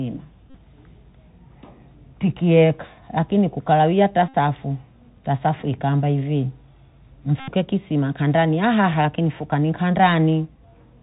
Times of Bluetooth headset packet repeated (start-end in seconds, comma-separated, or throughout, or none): 0.50-0.57, 4.28-4.35, 7.40-7.49